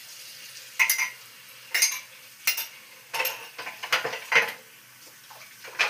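The signal holds steady throughout, with no technical faults to be heard at any point in these sounds.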